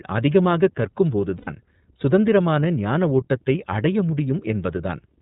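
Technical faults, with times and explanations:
throughout, iLBC codec: The audio is confined to narrowband, with nothing above 4 kHz, and the coding damage is plainly audible as a rough, slightly synthetic edge on the speech. iLBC codes the excitation of each frame on its own, without drawing on the previous frame, so the fine detail of the voice is approximated rather than kept. The character fits the 30 ms frame mode at roughly 13.3 kbps.
1.37–1.48 s, lost iLBC frames: Just before "சுதந்திரமான ஞானஓட்டத்தை அடைய", about 90 ms of sound is replaced by concealment, which fits three 30 ms frames going missing. The decoder fills the gap by repeating the last pitch cycle mixed with noise, so the gap comes across as a briefly held, slightly buzzy vowel rather than silence. Because each iLBC frame decodes independently, the speech returns cleanly as soon as good frames arrive.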